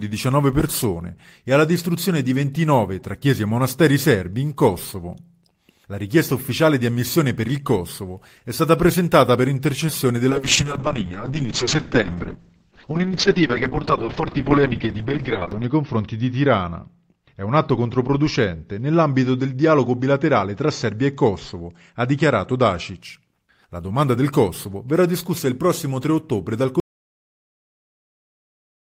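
At 10.3 s a call bitrate drop sets in. The link's bandwidth estimate fell, so the encoder was forced down from 32 kbps to 6 kbps. It spends far fewer bits per frame and quantises coarsely. Audio bandwidth narrows from 20 kHz to about 6 kHz. The sound turns muffled, rough and watery. The worst stretch holds for about 5.35 s. Quality climbs back by 23.03 s.

At 26.8 s the audio drops out to silence. It stops abruptly and never returns before the end. The gap is silent, with no room tone or noise floor underneath. Nothing from that final stretch survives. The likely cause is a lost input, such as a disconnected device, a failed link or an accidental mute, while the recorder kept writing empty samples.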